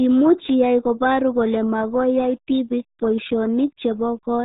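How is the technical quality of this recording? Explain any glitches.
Pretty rough, honestly. The whole speech clip runs through the RealAudio 14.4 codec, which squeezes everything to what sounds like about 8 kbit/s. Nothing above roughly 3.8 kHz survives, and the heavy coding leaves the speech muffled and gargly throughout.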